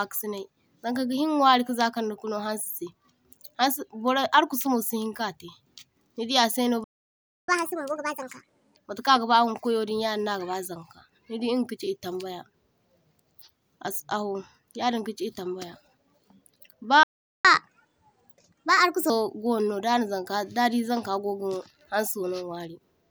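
After "nidi a’sayno", the speech stops dead at 6.84 s. This is a playback stall. The silence lasts 0.64 s, until 7.48 s. The player likely ran short of data or was blocked. From 7.48 s to 8.76 s comes catch-up at higher speed. The backlog is resampled and played 1.5 times faster. Pitch jumps by about seven semitones, then settles. A second playback stall starts at 17.03 s. It is silent for 0.41 s, until 17.45 s. A brief data shortage or blocked thread is the likely cause. Catch-up follows from 17.45 s to 19.10 s. Speed runs at 1.25 times normal. Pitch rises about four semitones before dropping back.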